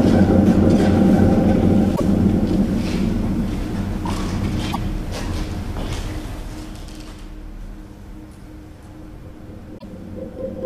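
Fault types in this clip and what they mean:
Damaged data in a compressed stream: three brief blips or squawks, each about 80 ms long, at 1.92, 4.69 and 9.76 s. Corrupted bytes in the compressed stream make the decoder misread those frames, lose sync and hunt for the next valid frame header.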